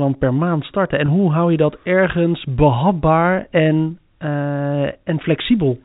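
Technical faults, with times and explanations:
1.06–1.08 s, packet loss with pitch repetition: about 20 ms, fitting one lost packet, is filled by repeating the last pitch period, a brief buzzy hold rather than a silent dropout, just before "hoe hou je dat".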